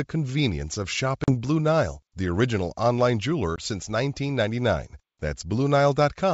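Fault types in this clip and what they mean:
Packet loss on an ADPCM call: packets on the G.722 link went missing, the gap was filled with silence, and the decoder's adaptive predictor and step size lost step with the sender's. Just after "convenience of", a hard-edged 40 ms hole at 1.24 s (about two packets) is followed by slightly distorted speech until 1.34 s. After "the original online", a shorter 20 ms dropout at 3.56 s recovers by 3.60 s.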